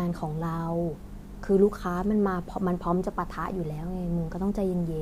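No technical faults can be heard at any point in the speech, so there is nothing to describe in time order.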